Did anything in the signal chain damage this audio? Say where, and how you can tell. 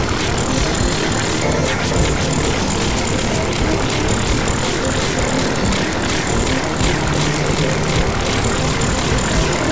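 Yes. The damage happened at sample-rate conversion: the audio was decimated with no anti-aliasing filter in front, which fits a drop from 44.1 kHz to 16 kHz. Everything above the new 8 kHz limit folded back down into the band as aliasing, at pitches unrelated to the original. Throughout the clip the high end sounds gritty and metallic, with spurious tones sitting roughly 10 dB below the signal and energy running right up to the 8 kHz edge.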